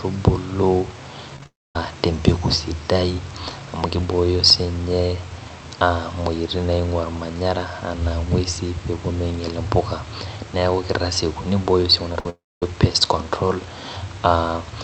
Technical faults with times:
1.36-1.46 repeated packet loss (robotic sound)
1.46-1.76 long network dropout
12.13-12.15 short concealed packet loss
12.20-12.26 burst of packet loss
12.30-12.63 long network dropout

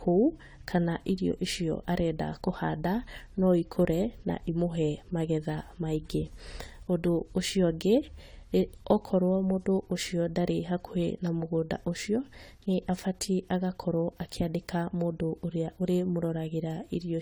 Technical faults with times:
0.00-17.21 generation loss

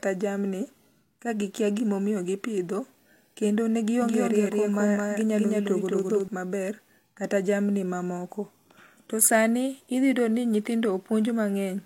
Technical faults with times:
4.02-6.28 doubled audio track

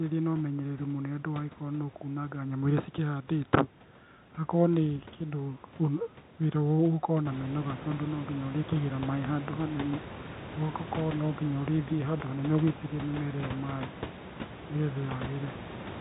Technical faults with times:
none

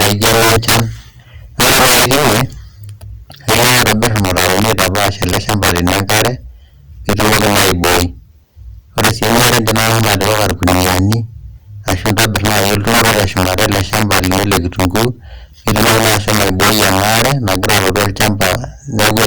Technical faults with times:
0.00-19.26 integer overflow

